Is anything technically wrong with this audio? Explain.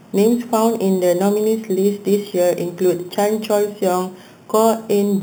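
Yes. Throughout, there is imaging from sample-and-hold upsampling: each sample was repeated without smoothing, which fits 8 kHz audio raised to 48 kHz. This mirrors the speech spectrum into 4–8 kHz at about -19 dB, giving a metallic fizz. A spectrogram shows flipped harmonics above 4 kHz, and the waveform looks staircased.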